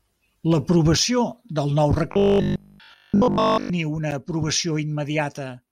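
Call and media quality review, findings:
Robotic sound from repeated short buffers, 2.12 to 3.70 s, right after "del nou". Rigid, metallic buzz at 50 Hz, loosely following the speech contour. Repeat period fits a 20 ms buffer. Likely cause: playout or jitter buffer underrun, with the last block looped while incoming audio is skipped. Practically the whole span is repeated material. No fresh audio gets through until 3.70 s.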